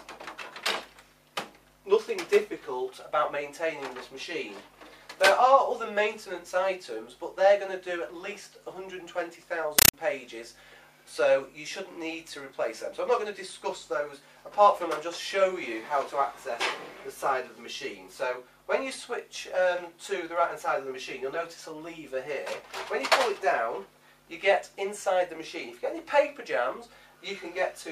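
An AC-3 bitstream reached the output undecoded, a compressed stream played as audio, from 9.79 to 9.94 s. The sound becomes harsh, very loud chattering static: 8 ms noise bursts separated by silence, repeating at 31.25 Hz, which fits a 384 kbps Dolby Digital stream.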